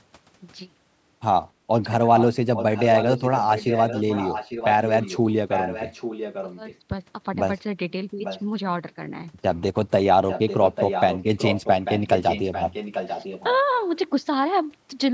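Echo leak at 2.16–2.27, 2.55–5.18, 5.48–6.78, 8.23–8.43 and 10.28–13.56 s: a copy of the speech returns about 0.84 s late, first only slightly quieter, then well below it. This is likely a far-end echo canceller missing loudspeaker sound picked up by its microphone.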